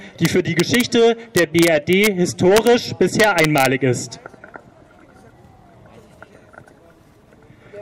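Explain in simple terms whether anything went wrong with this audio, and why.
Integer overflow shows up at 0.25 to 0.81 s, 1.37 to 2.07 s, 2.57 to 2.67 s and 3.20 to 3.66 s. The loudest peaks went past the largest number the system could store and wrapped around to the opposite extreme instead of stopping at the limit, causing harsh cracks.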